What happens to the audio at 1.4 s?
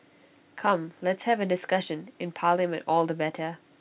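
Nothing goes wrong at 1.4 s. The speech carries on intact there, heard through the narrow telephone-band G.711 call path with nothing above 4 kHz.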